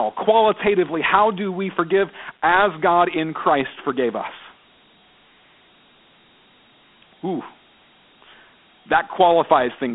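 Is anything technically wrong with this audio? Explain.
Yes. Dialogic VOX ADPCM coding affects the whole clip. This speech has been squeezed into a 4-bit adaptive differential format, which fits a rate of 32 kbps. Each sample stores only a coarse step from a prediction. The step errors leave a plainly audible gritty hiss that clings to the speech. The band runs from roughly 200 Hz to 3.5 kHz, like a phone line. Nothing is present above 3.9 kHz, so the sound is thin and muffled.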